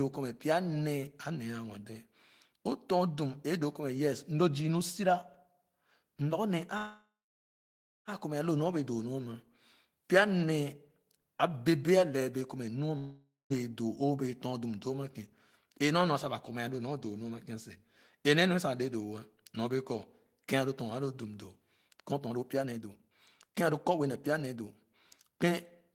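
At 6.77 s the sound stops being fresh and the last moment is stretched into a fading buzz, then roughly a second of silence, until 8.09 s. Playback resumes where it left off with nothing skipped: a call audio freeze, likely packets delayed until the jitter buffer emptied, adding about 1.3 s of delay.

From 12.98 to 13.52 s there is a long network dropout. A brief fading continuation of the last sound gives way to about 0.16 s of silence. When audio returns, about 0.52 s of material is gone, likely because those packets never arrived in time.

Jitter buffer speed-up runs from 21.89 to 24.66 s at about 128% rate, trimming roughly 0.7 s, and again from 25.28 s to the end at about 120%, trimming roughly 0.15 s. Short pitch-period slices are removed repeatedly, so the speech sounds hurried at unchanged pitch.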